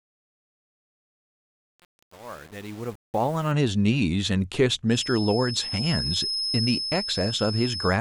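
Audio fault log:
0.00–3.52 s, truncation distortion on a fade: The fade runs to 3.52 s, but the gain stage holds only about 7 bits and adds no dither. The quietest part of the ramp is gritty because small values snap to a few coarse steps. The waveform shows staircase-like square steps at low level. The spectrogram shows broadband harmonic hash clinging to the signal instead of a clean noise floor.
4.86–8.00 s, feedback whistle: A thin, steady whistle at 5.2 kHz runs behind the speech, roughly 10 dB below it, swelling and fading slowly in level without building up. The likely cause is a loudspeaker-to-microphone loop sitting just at the edge of feedback, so one frequency keeps ringing without running away. On a spectrogram this appears as a single bright horizontal line at 5.2 kHz. The waveform shows a fine high-frequency ripple riding on the signal.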